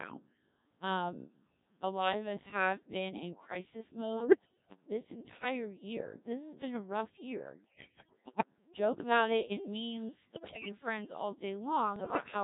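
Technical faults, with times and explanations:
Throughout, Codec 2 vocoder: the speech sounds robotic and buzzy throughout, with a synthetic quality. The decoder does not reproduce the original waveform. It rebuilds the voice from sine waves, using only pitch, voicing, energy and a coarse spectral envelope. The damage is heavy, and the thinness fits a very low rate of about 1.3 kbit/s, where each frame gets only a few dozen bits.
4.17–4.76 s, 7.64–8.45 s, 10.24–10.72 s and 11.96–12.26 s, bit errors on digital voice radio: in each of these stretches the synthetic voice lurches in pitch, loudness and tone colour, breaking into warbles, bleeps and gibberish. Flipped bits corrupt the parameters that define whole vocoder frames. The first burst is milder, with errors of several percent. The later three are harsher, with error rates nearer a sixth to a fifth of all bits.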